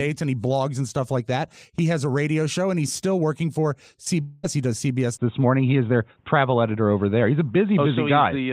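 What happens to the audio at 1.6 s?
Nothing out of the ordinary happens at 1.6 s; the audio carries on there without any audible fault.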